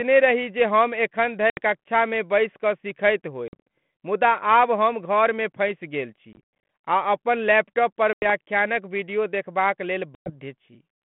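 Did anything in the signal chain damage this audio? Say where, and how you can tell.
Yes, at the network stage: packet loss on an ADPCM call. Hard-edged silent holes appear at 1.5–1.58, 3.48–3.61, 6.33–6.67, 8.13–8.3 and 10.15–10.31 s. Each leaves the decoder's predictor and step size out of step, so speech resumes slightly distorted, recovering within tens of milliseconds.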